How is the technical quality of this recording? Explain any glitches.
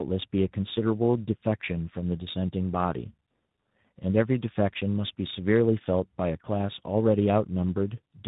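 Quality is poor throughout: tandem speech coding passed the speech through two speech coders in a row, each recoding the last one's damage, leaving it rough, muffled and warbly, with nothing above 3.8 kHz.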